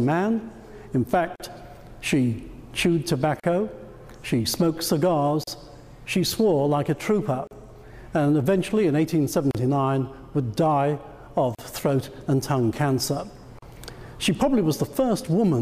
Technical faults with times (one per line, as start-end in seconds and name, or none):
1.36-1.40 gap at a join of encoded pieces
3.40-3.44 gap at a join of encoded pieces
5.44-5.47 gap at a join of encoded pieces
7.47-7.51 gap at a join of encoded pieces
9.51-9.55 gap at a join of encoded pieces
11.55-11.59 gap at a join of encoded pieces
13.59-13.62 gap at a join of encoded pieces